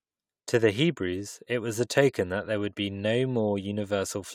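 No technical faults are audible anywhere in this speech recording.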